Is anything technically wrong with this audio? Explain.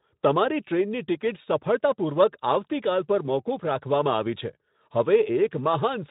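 No, nothing in this speech is technically wrong. It carries the narrow-band character of a Speex codec, with nothing above about 3.8 kHz and only light coding texture.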